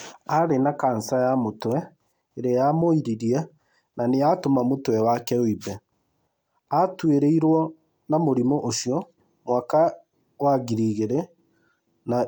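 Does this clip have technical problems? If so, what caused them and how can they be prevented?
No, nothing in this recording stood out as a technical problem on listening, so there is nothing here that needs preventing.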